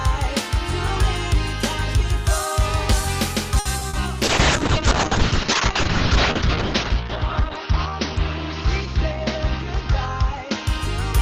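At 3.59 s the sound is held for about 60 ms, until 3.67 s, with a faint buzzy sustain. This is a short stall from a late packet. The jitter buffer ran dry, so the receiver stretched the last sound while it waited, then carried on from the same point. Nothing is lost, and everything after it plays about 60 ms later. That separates it from packet loss, where real audio is discarded.

Close after that come two short concealed packet losses, at 3.79 to 3.83 s (20 ms) and 3.89 to 3.95 s (40 ms). Each is a brief smear or wobble where the receiver invented a continuation of the previous sound and then blended back into real audio. Unlike the stall, the original material in those gaps never arrives, so those moments are replaced outright rather than delayed, and the timing does not slip.

From 4.23 s to 10.97 s there is a call bitrate drop. The audio turns coarse and watery, and the top end is cut off sharply at about 6 kHz instead of reaching 20 kHz. 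That fits the encoder being pushed from around 96 kbps down to 6 kbps after the bandwidth estimate fell. The worst stretch lasts about 1.95 s. Unlike the packet faults, this is a sustained change in quality rather than an isolated glitch, and it persists until the bitrate recovers near the end.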